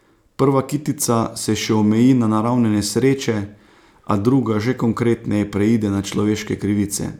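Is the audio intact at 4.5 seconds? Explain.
Yes, at 4.5 seconds the speech plays through cleanly, with no dropout, click, distortion or other audible fault at that point.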